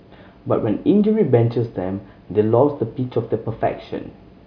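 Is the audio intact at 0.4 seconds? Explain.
Yes, the audio is intact at 0.4 seconds, with no audible fault at that moment.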